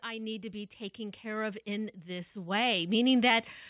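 Automatic gain rising runs through nearly the whole speech clip, from 0.05 s to 3.54 s. The gain control judged the input too quiet and kept pushing its gain up, so the level climbs by about 14 dB over those three and a half seconds, with the background noise swelling in step with the talker. The audio carries nothing above 4 kHz, which fits a narrowband call codec such as G.711, though that band limit is not part of the fault.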